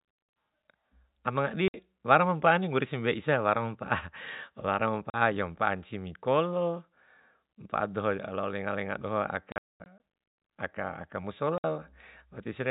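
A speech clip carried over G.711 telephone coding, which limits it to below 4 kHz, is broken up by packet loss filled with silence at 1.68–1.74 s, 5.1–5.14 s, 9.52–10.0 s and 11.58–11.64 s. The third burst scatters about 0.3 s of gaps across that half-second, the longest 0.22 s. The holes are clean and hard-edged, in steps that fit 20 ms packets. Repeated or smeared sound would suggest concealment rather than plain silence.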